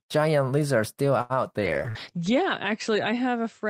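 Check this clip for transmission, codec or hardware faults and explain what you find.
Three transmission faults affect this speech recording: a late-packet stall, a drop in the call bitrate, and a burst of packet loss inside that lower-bitrate stretch.

From 1.21 to 1.33 s, right after "giant lizard still", there is a short stall from a late packet. A packet missed its playout time and the jitter buffer ran dry. The receiver held the last sound for 82 ms until the packet arrived, then resumed where it had stopped. Nothing is lost, but everything after it plays 82 ms later. A spectrogram shows the same spectral frame stretched into flat horizontal bands, and the waveform shows a repeated, smeared cycle pattern.

From 1.60 s to the end there is a call bitrate drop. The bandwidth estimate fell, so the Opus encoder went from 32 to 10 kbps and narrowed its audio band from 20 kHz to 8 kHz. The lowest rate held for about 1 s. 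The sound becomes duller and coarser, with the top end gone. On a spectrogram, energy above 8 kHz disappears, and the remaining bands look blotchy and less detailed.

From 1.90 to 1.98 s there is a burst of packet loss. Packets were lost, so the receiver filled 55 ms by continuing the last sound while fading it down, then jumped ahead. About 60 ms of audio is missing. The waveform shows a decaying stretch followed by an abrupt change in shape where playback resumes further on. The spectrogram shows a fading smear and then a discontinuity.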